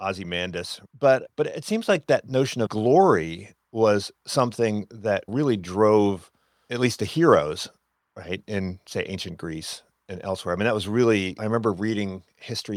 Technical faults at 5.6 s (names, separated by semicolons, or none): none